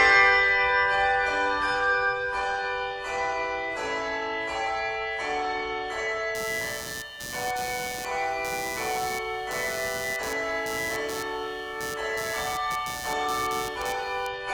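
From 6.35 s to 14.27 s, computer activity noise rides under the sound: a buzzy, chirping texture pulsing at around 150 times per second, sitting roughly 15 dB below the signal. Changing load on the processor, graphics or mouse disturbs the ground the audio circuit shares. Unlike steady mains hum, which holds a fixed pitch tied to the power line, this buzz shifts and flutters with the machine's workload rather than with anything in the sound.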